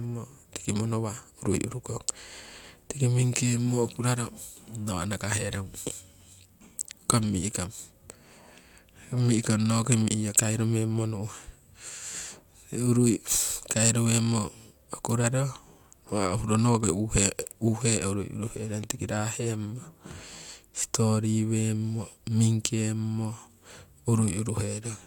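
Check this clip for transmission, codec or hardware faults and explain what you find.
No transmission, codec or hardware fault can be heard anywhere in this speech recording. There is nothing to flag at any point in it.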